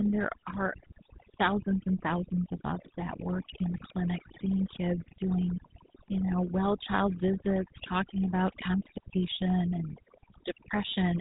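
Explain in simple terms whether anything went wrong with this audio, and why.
Two faults run through the whole clip. Overdone noise removal has pushed the background down, breaking it up into twinkling specks, and it strips quiet parts of the speech. The GSM full-rate codec, an old mobile-phone format, rebuilds speech from a simple model driven by spaced pulses, giving a buzzy, gravelly roughness and cutting everything above 3.8 kHz.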